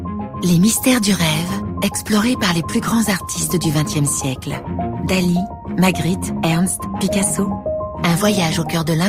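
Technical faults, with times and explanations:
No technical faults detected.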